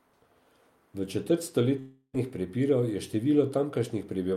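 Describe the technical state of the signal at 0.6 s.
At 0.6 s the signal is intact, with no audible dropout, distortion, clipping or other fault.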